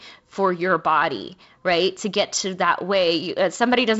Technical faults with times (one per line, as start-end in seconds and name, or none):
none